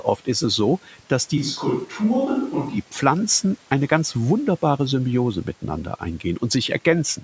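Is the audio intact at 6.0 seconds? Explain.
Yes, the speech at 6.0 seconds is intact, with only the normal call microphone processing and a faint room noise well below the speech, neither of which is a fault.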